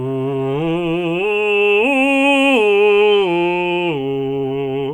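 Listening to this music clip, nothing stood out as a technical problem at any point.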